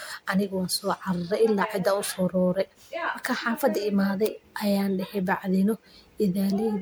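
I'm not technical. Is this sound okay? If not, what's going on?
No, the speech sounds swirly, hollow and smeared from start to finish: that's generation loss, likely from being saved as MP3 around five times over.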